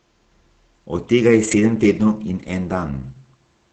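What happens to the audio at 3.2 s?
Nothing goes wrong at 3.2 s: the speech continues intact through that moment, carried by the call path as normal with its high end stopping at 8 kHz.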